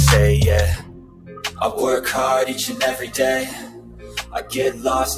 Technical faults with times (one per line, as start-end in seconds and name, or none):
0.00-5.17 noise suppressor applied to music or sounds
0.77-1.61 sound cut by the noise suppressor
3.49-4.52 sound cut by the noise suppressor